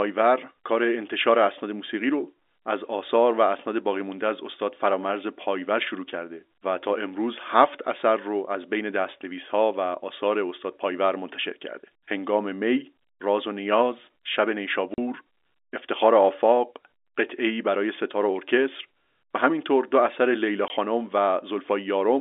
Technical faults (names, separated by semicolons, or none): packet loss filled with silence